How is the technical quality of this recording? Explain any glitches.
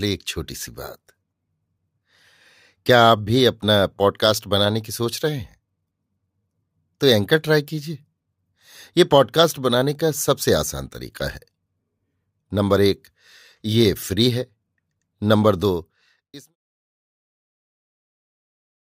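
The technical quality of this recording is good, with no glitches to explain, and the speech simply fades out smoothly by 16.56 s.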